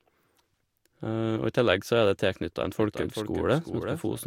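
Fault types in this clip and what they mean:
Doubled audio track: from 2.77 s to the end, a full-band copy of the speech trails roughly 400 ms behind at about 5 dB quieter, with no decay or room colour and an abrupt entry, likely from a slower capture path or duplicate edit.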